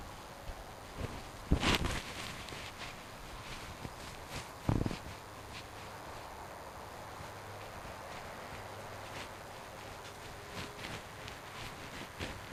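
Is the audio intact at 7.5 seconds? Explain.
No. At 7.5 s, as across the whole clip, a DECT cordless phone buzz sits roughly 20 dB under the sound. Radio bursts every 10 ms are rectified into a thin 100 Hz buzz, seen as evenly spaced harmonic lines on a spectrogram and regular ripples on the waveform.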